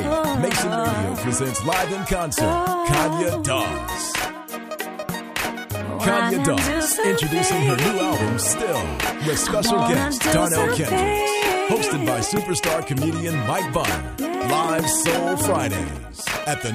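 From 8.23 to 9.11 s a GSM phone buzz sits over the audio: a harsh, raspy tone at 217 Hz, about 15 dB below the signal and unrelated to it. A nearby 2G handset in an active call is radiating rapid bursts, and the audio circuitry rectifies each radio pulse into the line. On a spectrogram this shows as a dense comb of harmonics stacked at multiples of 217 Hz. The waveform carries a steady train of sharp pulses every 4.6 ms.

From 15.40 to 16.68 s, GSM signalling bursts appear: a galloping dit-dit-dit of ticks and brief 217 Hz buzzes, roughly 15 dB under the signal. Here the handset transmits only short groups of bursts, as it does while exchanging control traffic with the network, and the circuitry again demodulates them. The spectrogram shows separate short blocks of the same harmonic comb with gaps between them. The waveform shows clustered pulse packets rather than a continuous train.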